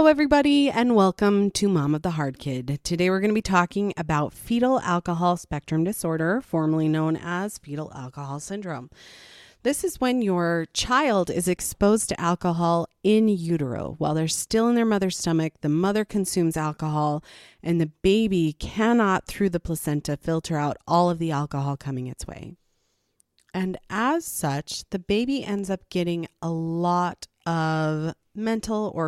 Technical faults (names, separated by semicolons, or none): corrupt frame decoded